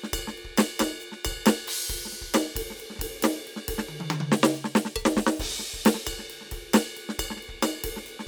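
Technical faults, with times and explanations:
The music signal carries no audible technical faults at any point in the clip.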